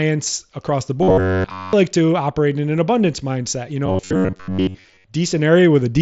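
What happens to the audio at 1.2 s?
Robotic sound from repeated short buffers runs from 1.03 to 1.73 s, covering essentially that whole span. Fresh audio likely arrived too late, so playback kept looping its last fragment, about 10.7 ms long, while the real speech was dropped. The loop imposes a steady 93.8 Hz buzz that loosely tracks the speech. A spectrogram shows rigid, evenly spaced horizontal harmonics at multiples of 93.8 Hz, and the waveform shows identical cycles repeating.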